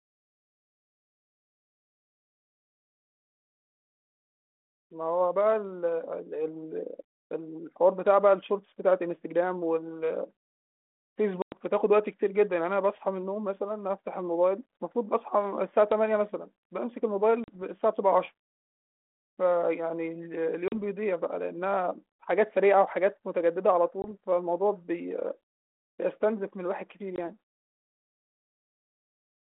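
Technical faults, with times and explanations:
11.42 to 27.16 s, packet loss on an ADPCM call: hard-edged silences of 100 ms at 11.42 s, 40 ms at 17.44 and 20.68 s, and 20 ms at 24.02 and 27.16 s. Unlike a clean dropout, speech resumes with brief, slight distortion, because the decoder's predictor and step size have drifted from the sender's. It settles within tens of milliseconds.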